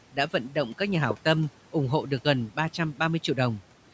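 It's a short speech clip, and two things stand out. Between 0.13 and 0.56 s there's speech cut by the noise suppressor: it mistook soft bits of the speech for background and pulled them down along with it, by about 12 dB at the deepest, so roughly 150 ms all told comes out swallowed and faint rather than gone. The room noise sits about 21 dB under the speech, and the call microphone processing has the band topping out at 8 kHz. Then, at 1.11 to 1.13 s, there's a single loud pop, a sharp click landing roughly 10 dB above the speech while the sound carries on underneath. That's likely a voltage spike from a plug, switch, static discharge or driver glitch getting into the signal chain, with the downstream circuitry shaping it into that brief crack.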